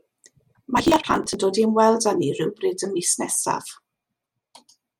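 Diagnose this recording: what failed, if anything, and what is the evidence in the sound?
Driver or buffer stage: processor overload crackle from 0.77 to 1.34 s, a gritty tearing where many buffers of around 10 ms were skipped, leaving hard-edged gaps.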